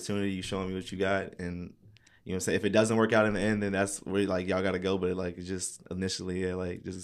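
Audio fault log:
Nothing to log here, as this speech recording comes through without any technical faults to flag.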